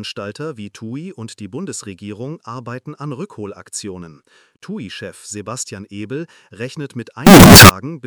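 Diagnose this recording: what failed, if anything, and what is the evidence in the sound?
Sample-format conversion broke near the end: from 7.27 to 7.69 s the sound turns into brutal, harsh distortion, likely signed and unsigned mixed up on 16-bit samples.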